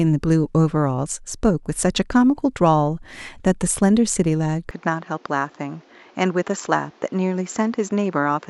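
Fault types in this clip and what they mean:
Input switched to a poorer device: from 4.71 s the sound turns duller and boxier, with nothing above 7.6 kHz, a drop of about 5 dB and a new noise floor roughly 30 dB down, with no gap at the change. That's likely the recording jumping to a weaker microphone or headset mid-take.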